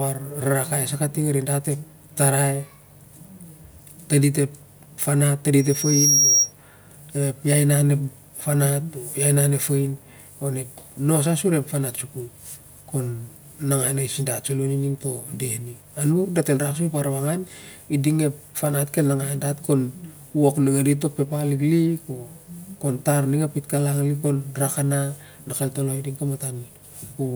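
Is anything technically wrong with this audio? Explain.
Yes. From 5.58 to 6.53 s a piercing tone near 5.6 kHz swells over about half a second to sit slightly above the speech. This is loudspeaker feedback squeal: the microphone hears its own loudspeaker, and loop gain exceeds one at that pitch.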